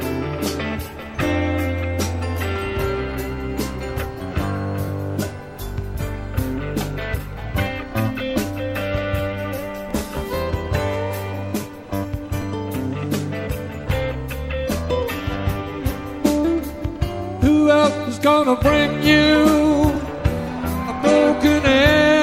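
At 7.39 s, 9.91 s and 12.42 s there are overlapping chunks. The audio was handled in chunks about 2.5 s long. Each new chunk began slightly before the previous one ended. So about 12 ms of sound plays twice at every join. The doubled sliver breaks the flow of the waveform. Each join is heard as a brief click or small stutter. The three events fall at an even 2.5 s spacing.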